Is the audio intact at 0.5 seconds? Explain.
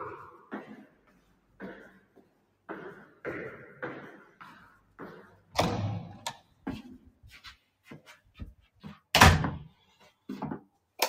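No. From 0.38 to 3.24 s the sound sinks in level, dropping by about 12 dB at its deepest, with its steadier or fading parts pulled down for around two seconds in total. This is sound cut by the noise suppressor: it mistook this material for noise and attenuated it harder than the rest.

That happens because a noise suppressor applied to music or sounds is running across the whole clip. A processor built for speech treats held tones, ambience and decays as noise, so the level pumps and thins, swinging by around 20 dB.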